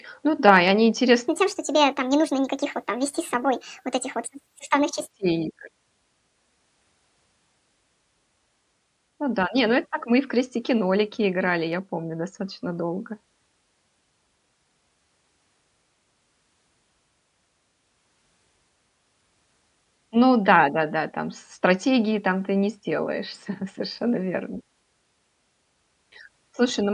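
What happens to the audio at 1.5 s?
At 1.5 s the speech is in a stretch of wrong sample rate. It runs from 1.28 s to 5.11 s, starting just after "да и они". The samples play back faster than they were captured, with no conversion. Speed and pitch therefore rise together. The speech runs about 1.45 times too fast and sits about 6.5 semitones higher. That ratio fits audio recorded near 22 kHz but played at 32 kHz.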